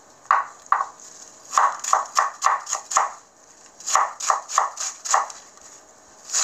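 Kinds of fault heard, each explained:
No technical faults can be heard anywhere in the sound.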